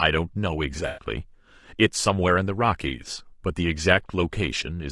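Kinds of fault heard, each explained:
Low-delay AAC compression: the speech sounds plainly rough and grainy throughout, with noise between harmonics, likely from AAC-ELD's short frames at a bitrate near 32 kbps.
AAC frame loss with concealment: from 0.87 to 1.05 s the speech smears into a noisy patch, as the decoder rebuilt about 100 ms from the last good spectrum.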